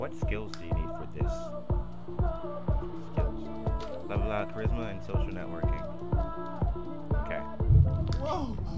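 No technical fault can be heard anywhere in this clip. Nothing in the audio points to a problem in how it was captured, processed or delivered.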